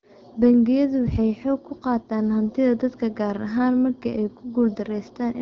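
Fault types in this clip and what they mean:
No faults can be heard anywhere in this speech.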